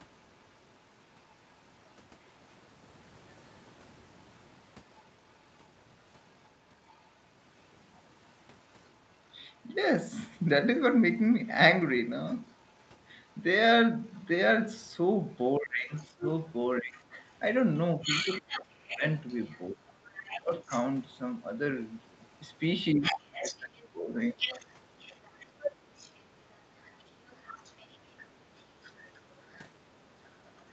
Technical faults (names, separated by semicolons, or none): other side's voice leaking through; speech suppressed in double talk